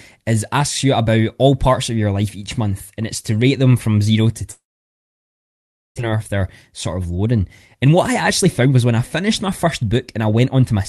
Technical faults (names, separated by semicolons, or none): long network dropout; jitter buffer speed-up